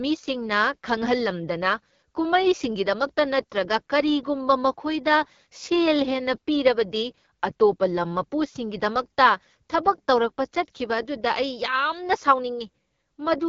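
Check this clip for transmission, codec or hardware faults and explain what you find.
One fault runs through the whole clip: AMR wideband (HD Voice) codec damage, and it is plainly audible. The speech has nothing above 7.4 kHz. The codec models the voice with a pulse-driven vocal tract filter up to 6.4 kHz and fills the top band with shaped noise. Here the coding is coarse, which fits one of the lowest AMR-WB rates, around 8.85 kbit/s. The result sounds rough and raspy throughout.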